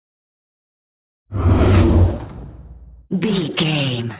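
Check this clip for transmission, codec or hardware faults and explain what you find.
One fault runs through the whole clip: aliasing. Energy above 4 kHz folds back to wrong pitches, consistent with an unfiltered drop to 8 kHz, leaving gritty, metallic highs about 20 dB down. A spectrogram shows mirrored streaks running hard up to 4 kHz.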